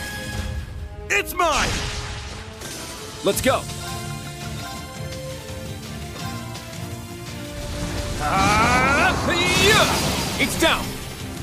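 Nothing goes wrong anywhere in this one; there's no dropout, glitch or other technical fault to point to at any moment in the audio.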